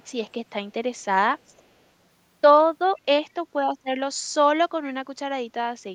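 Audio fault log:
2.97–3.01 s and 4.84–4.94 s, echo leak: likely a loudspeaker-side echo canceller letting some microphone pickup through, so brief scraps of the speech return 415 ms late, barely audible at about 40 dB down first, then plainer at about 25 dB down.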